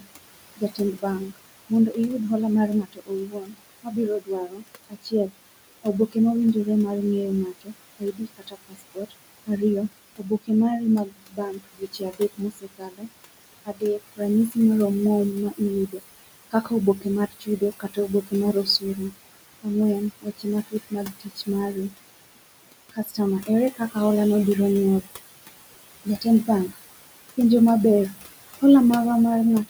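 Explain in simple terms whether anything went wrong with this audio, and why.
Something did go wrong, and it comes from the noise suppressor, the processing meant to hide background hiss and hum.

The first problem is noise suppressor artifacts, audible for the whole clip. The suppressor pushes the background down hard whenever it thinks only noise is present, then lets it back in under the speech. So the background seems to pump, dropping away in the gaps and rising with each phrase. Ordinary room noise would stay steady; this rising and falling is the giveaway.

The second problem is speech cut by the noise suppressor. Here the suppressor mistakes parts of the speech itself for noise and turns them down along with the background. This happens from the start to about 13.1 s, where around five seconds in total are affected, and again at 13.65–14.57 s, 15.5–19.66 s, 20.21–21.94 s, 22.92–23.96 s and 26.05–26.77 s. 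Soft sounds and word endings come out swallowed or faint. Unlike a microphone dropout, the cuts hit only the quiet parts of speech, while louder syllables come through.

Some room noise sits well below the speech, as expected for a real room.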